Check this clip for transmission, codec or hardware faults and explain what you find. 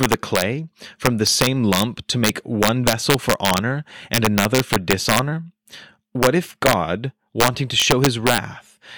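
The speech has an integer overflow fault throughout. The signal runs about 5 dB too hot. Each loud peak that passes the integer limit wraps to the opposite sign instead of being held. Well under one percent of samples flip, causing sharp, violent cracks on louder syllables, harsher than clipping.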